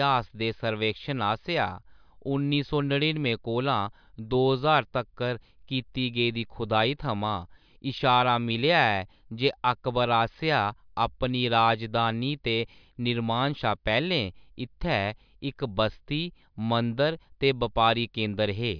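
Nothing stood out as a technical fault on listening to this speech recording.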